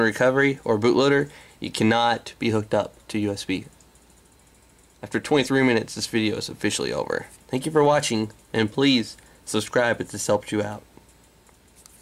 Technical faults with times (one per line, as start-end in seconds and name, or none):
none